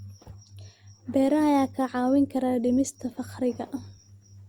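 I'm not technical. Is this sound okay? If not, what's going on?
No. From 1.12 s to the end, the speech suddenly gets rougher, with more compression artefacts, with no gap. That's an adaptive stream at a lower bitrate, switching to lower quality when the connection slowed.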